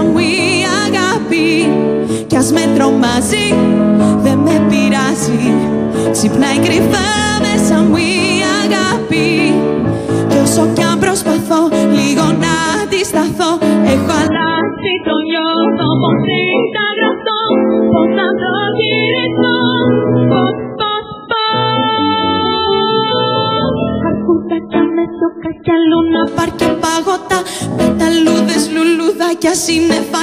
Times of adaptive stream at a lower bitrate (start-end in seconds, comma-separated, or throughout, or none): 14.27-26.27